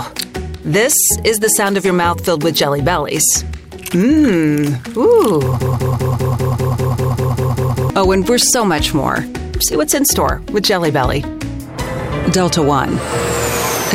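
From 5.61 s to 7.90 s the audio falls into a broken-record loop: a fragment of about 197 ms repeats exactly, back to back, 12 times. The likely cause is a stalled player or stream resending its last buffered piece, so the intended sound for that span is lost.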